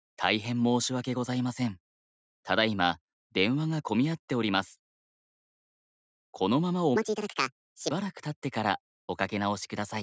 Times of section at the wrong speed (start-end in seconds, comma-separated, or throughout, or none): 6.96-7.91